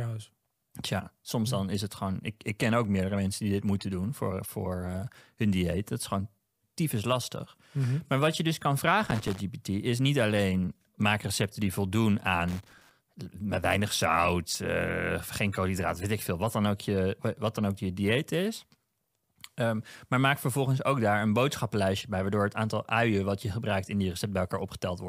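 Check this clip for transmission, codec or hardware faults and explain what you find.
Two bursts of loose connector crackle break up the speech. The first runs from 9.06 to 9.40 s, after "wat je dus kan" and before "is niet alleen maak", and the second from 12.48 to 12.91 s, right after "maak recepten die voldoen". Each is a ragged scratch of clicks lasting a third to nearly half a second. A worn or dirty contact is flickering between touching and not, chopping the signal on and off, and any DC on the line turns each break into a pop.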